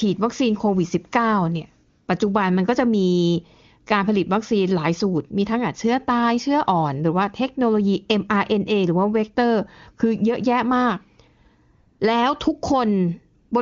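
In this speech clip the phone decided the talker had gone silent, stopped sending speech frames and let the receiver synthesise AMR comfort noise, so the real background gives way to a smooth, steady hiss at 1.89 to 2.07 s, 11.73 to 11.99 s and 13.39 to 13.51 s, over clean HD Voice audio.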